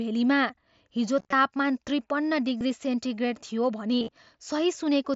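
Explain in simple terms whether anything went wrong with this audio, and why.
Concealed Bluetooth headset packet loss occurs at 1.19–1.33 s (just before "तापमान त्रिपन्न"), 2.58–2.61 s (just after "हिजो तापमान त्रिपन्न") and 3.99–4.09 s. The headset lost short bursts of audio, and the phone filled each gap by repeating a recent slice of sound. This leaves a brief buzzy or warbly patch where the speech should be.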